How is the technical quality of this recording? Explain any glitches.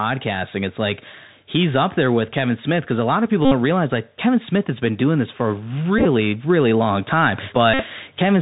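The recording has two audible problems: narrowband Bluetooth coding throughout and three short packet-repeat buzzes.

Bluetooth CVSD headset codec, throughout: the 64 kbps one-bit delta coding cuts everything above 4 kHz, roughens s sounds and leaves a granular hiss under the speech.

Bluetooth headset packet repeated, three times. Each time, the headset re-decoded the previous packet at a 3.75 ms period, producing a buzz near 267 Hz:
At 3.45–3.52 s, after "a lot of people" and before "realize like", a steady buzz covers about 64 ms.
At 5.99–6.05 s, between "doing this for a" and "really long time", about 49 ms of repeats are scattered across 67.5 ms as brief broken bursts.
At 7.74–7.83 s, after "really long time", a steady buzz lasts about 56 ms.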